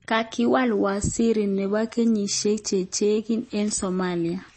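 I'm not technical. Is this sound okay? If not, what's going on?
No. The speech sounds dull and watery from start to finish, with nothing above about 8.3 kHz, so the crisp top end of s and t sounds is missing. The cause is likely heavy MP3 compression. To save space, the encoder cut off the treble at a fixed point and discarded quieter detail, which flickers in and out from moment to moment. That flicker is the swirly texture audible throughout the clip.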